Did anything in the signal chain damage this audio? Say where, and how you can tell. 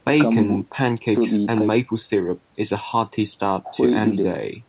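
No, nothing in the chain damaged this speech; the absence of content above 4 kHz is the expected narrowband limit of the call codec, which fits G.711 A-law, and not a fault.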